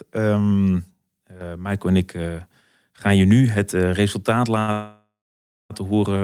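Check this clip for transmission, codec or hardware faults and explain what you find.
Two transmission faults occur close together in this speech, both right after "nu het eh resultaat".

Short stall from a late packet, 4.59 to 4.71 s: a packet missed its playout time, so the jitter buffer ran dry and the receiver stretched the last sound for 83 ms. The sound is held too long, slightly buzzy. Nothing is lost, but playback now runs 83 ms later.

Call audio freeze, 4.72 to 5.73 s: the last sound continues as a fading buzz and then falls silent for about 600 ms, roughly 1 s in all. Packets were likely held up in the network, emptying the buffer. Speech resumes where it stopped, with nothing missing.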